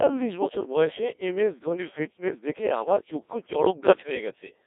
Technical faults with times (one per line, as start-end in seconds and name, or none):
0.00-4.67 Codec 2 vocoder